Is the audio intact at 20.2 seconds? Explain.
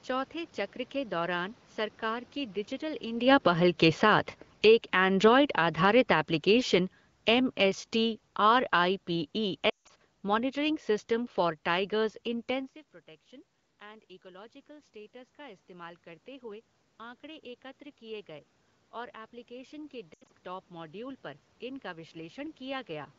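No. Around 20.2 s there are lost AMR speech frames, from 20.13 to 20.29 s. About 120 ms of audio is missing, scattered over 160 ms, with the longest unbroken gap about 80 ms. That pattern fits a handful of 20 ms wideband frames failing their checksum. For each missing frame, the decoder repeats the last good pitch and vocal tract settings at falling gain. The sound therefore briefly smears and warbles, sags toward silence during the longer gap, and comes back thin and rough for a moment.

The same moment also falls inside a stretch of automatic gain rising, which runs from 13.8 to 23.14 s, starting just after "इंटेंसिव प्रोटेक्शन". The level reaching the microphone fell by about 20 dB. The gain control responded by slowly raising its gain by about 11 dB, so the voice and the room noise swell together over several seconds instead of jumping. At 20.2 s that boost is still climbing, so the frame loss happens during a gradually lifting level.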